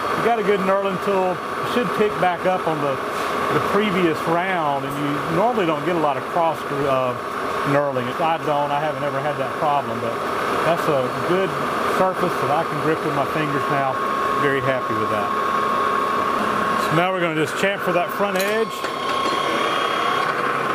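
Compressed frames are skipped at 1.63 s, where the audio jumps forward by about a fifth of a second. The gap points to roughly seven frames of around 23 ms each that were either missing from the stream or rejected by the decoder as damaged. At the join the sound resumes slightly further along than expected.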